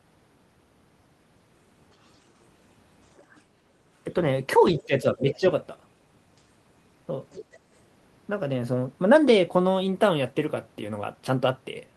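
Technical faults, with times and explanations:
3.17–3.41 s, 4.77–4.85 s and 7.31–7.59 s: other side's voice leaking through. A second voice sits faintly under the talker in short scraps. The first is very quiet, about 35 dB down. The second and third are stronger, roughly 20 dB down. Each lasts under a third of a second. The likely cause is the far end playing on a loudspeaker, with the echo canceller missing part of it.
4.79–5.46 s: speech suppressed in double talk. The talker's level sags as the leaked voice appears at 4.77 s. At its deepest it drops by around 15 dB. The dips add up to about half a second within this span. Both sides were likely speaking at once here. The echo canceller could not tell its own talker from the returning echo. It turned everything down together, so the talker fades in patches.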